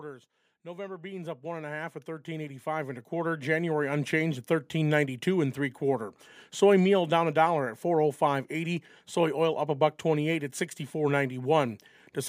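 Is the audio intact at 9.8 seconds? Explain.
Yes, the speech at 9.8 seconds is intact, with no audible dropout, click, distortion or other fault at that point.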